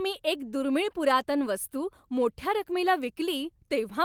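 Speech, with no technical faults audible anywhere.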